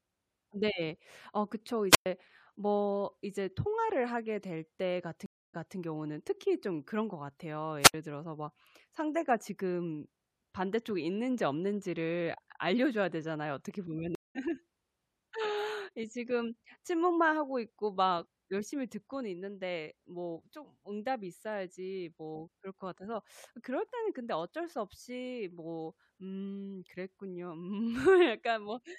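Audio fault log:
1.90–2.06 s and 7.80–7.94 s, wireless microphone squelch dropout: Hiss swells, then the audio drops to near silence for about 111 ms and 69 ms. The radio signal fades, so the receiver's squelch mutes the output until reception recovers.
5.26–5.77 s and 14.15–14.37 s, stream reconnect: The connection breaks, leaving silences of 276 ms and 198 ms. A fresh decoder restarts mid-stream. The first resumes 232 ms earlier, repeating audio. The second resumes about a fifth of a second later, skipping some.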